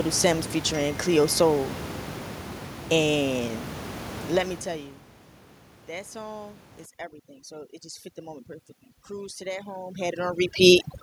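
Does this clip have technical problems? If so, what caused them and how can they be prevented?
Yes. From 6.86 s, just after "that song", to the end, overdone noise removal sets in. The suppressor, set too strong, cuts any frequency band near its noise estimate, taking quiet parts of the speech with it. The background drops and breaks up into twinkling specks. A spectrogram shows scattered isolated dots and ragged holes between harmonics. Lowering the reduction strength, or reducing the noise at its source, would prevent this.

Between 9.07 and 10.89 s, automatic gain rising lifts the level by about 5 dB. The gain control judged the input too quiet and ramped up gradually, so speech and background swell together. On the waveform this appears as an envelope that widens evenly over nearly two seconds. Setting a proper input level, or limiting how fast the gain can climb, would prevent it.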